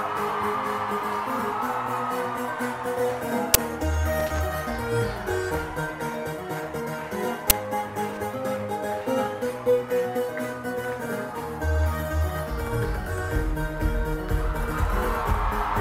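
At 3.54 s an uninitialised buffer bursts out: about 11 ms of stale memory played as samples, which fits a 512-sample buffer. It is a sharp, loud digital crack. On a spectrogram it shows as a bright full-band vertical slab, and on the waveform as a short block. At 4.20–4.40 s loose connector crackle appears as contacts make and break, chopping the signal into irregular scratchy crackle seen as ragged spikes and scattered vertical streaks. Both recur: the buffer at 7.50 s and the crackle at 8.08–8.17 s.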